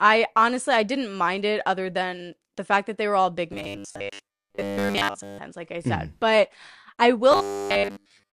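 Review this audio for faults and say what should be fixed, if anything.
From 3.53 to 5.41 s and again from 7.32 s to the end, the speech turns into a rigid metallic buzz near 100 Hz. This is robotic sound from repeated short buffers, likely from late-arriving audio, with a 10 ms slice looped while most real signal is skipped. To prevent it, enlarge the jitter buffer or fix the delivery stall so audio reaches playback on time.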